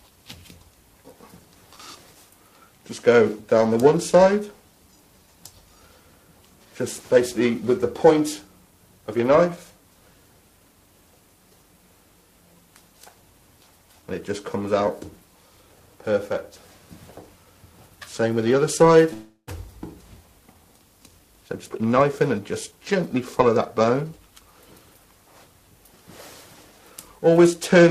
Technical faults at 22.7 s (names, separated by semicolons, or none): periodic clock jitter; jitter buffer speed-up